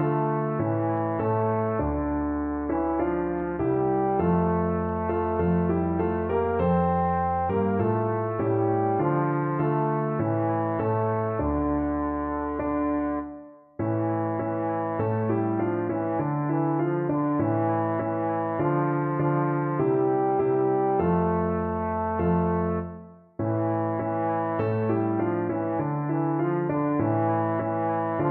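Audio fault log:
Nothing stood out on listening to this audio.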